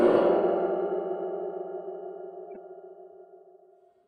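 At 2.54 to 2.57 s, a corrupt frame is decoded: a brief blip of foreign noise cuts into the sound for a couple of frames, about 24 ms. Flipped bits in the compressed data made the decoder apply wrong gains or misread spectral codes, so energy lands at the wrong frequencies. On a spectrogram it shows as an isolated rectangular patch of misplaced energy. On the waveform it is a small jagged disturbance peaking near about -35 dBFS.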